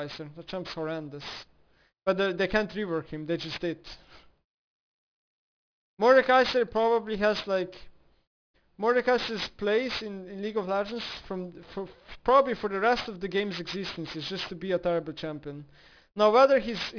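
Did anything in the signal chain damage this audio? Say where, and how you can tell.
Yes. Aliasing runs through the whole clip, from a sample-rate conversion stage: the audio folds at 5.5 kHz, pointing to a downsample from 48 kHz to 11 kHz with no anti-alias filter. Upper content reflects back as gritty, unrelated tones roughly 15 dB below the signal.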